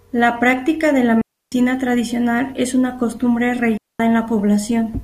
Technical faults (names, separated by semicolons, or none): digital wireless dropout